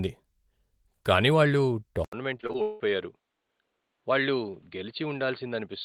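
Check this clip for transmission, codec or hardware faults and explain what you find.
Two faults are present, both beginning just after the two-second mark.

From 2.05 s to the end, right after "కానీ వాళ్ళు", the input likely switched to a poorer device. A short silence of 80 ms is followed by a narrower band with nothing above 4.6 kHz, a level about 5 dB lower, and a new noise floor roughly 50 dB down, so the speech turns dull and boxy.

From 2.37 s to 2.82 s there is repeated packet loss with a robotic sound. Five gaps occur in quick succession, the longest 176 ms. Each is filled by extending the preceding sound, so about half of this stretch is concealed, making it choppy and robotic with pieces missing.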